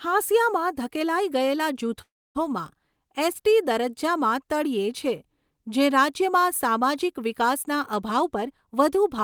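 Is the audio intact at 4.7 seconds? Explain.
Yes, the audio is intact at 4.7 seconds, with no audible fault at that point in the speech.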